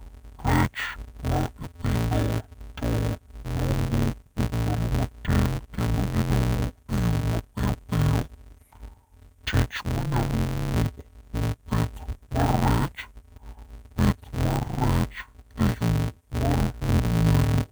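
Interleaved audio read as planar runs throughout the speech. Each short block of alternating left and right samples has been split down the middle, so its first half plays as the left channel and its second half as the right, with both halves at half speed but the overall pace intact. The blocks here are only 5.8 ms long, which fits a 256-sample buffer, so the result is dull, robotic speech with a buzz at 172 Hz, the block rate, and no clear octave drop.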